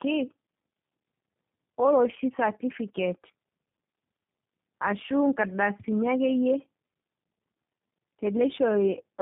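From start to finish the speech carries tandem speech coding: it sounds like it passed through a low-rate speech codec twice, consistent with 8 kbit/s G.729A at each end of a call with a 64 kbit/s G.711 link between them. The second encoder had to model the first one's already damaged output, so the voice comes out rough, muffled and warbly. On a spectrogram, energy stops at 3.8 kHz, and the harmonics look smeared and patchy rather than cleanly striated.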